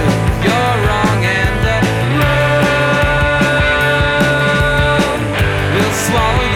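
No technical faults can be heard anywhere in this audio. Nothing in the signal calls for a timestamp or a cause.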